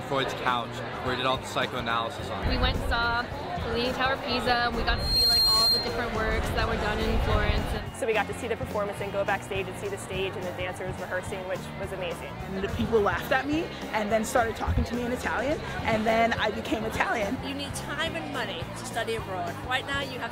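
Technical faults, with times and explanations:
4.89–6.14 s, loudspeaker feedback squeal: the microphone is picking up its own loudspeaker, and at 4.2 kHz the loop gain tops unity, so that frequency feeds on itself. A piercing single tone swells up within roughly a third of a second and sits about 5 dB above the audio.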